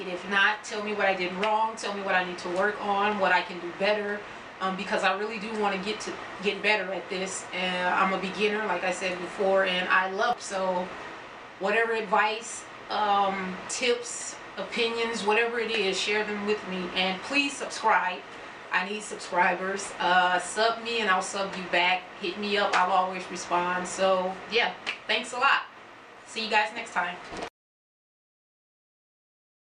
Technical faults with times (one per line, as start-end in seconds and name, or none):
none